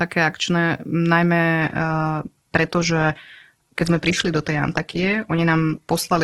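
Adaptive stream at a lower bitrate, from 1.60 s to the end: the connection slowed and playback switched without a gap to a much leaner encoding, consistent with Opus dropping from about 64 to 12 kbit/s. The treble turns thin, with nothing above 12.4 kHz.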